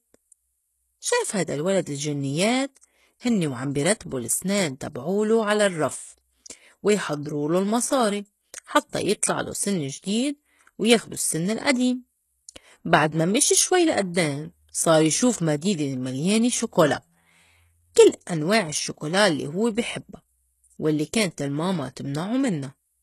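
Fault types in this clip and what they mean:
HE-AAC compression: The speech has a coarse, synthetic-sounding top end throughout, with plainly audible damage and nothing above about 12.3 kHz, which points to a rate near 16 kbps and likely HE-AAC. The lower spectrum is coded directly, while the treble is rebuilt from copied lower bands, so s sounds come out gritty and lispy rather than dull. A plain low-pass or low-bitrate codec would instead lose the treble and sound muffled.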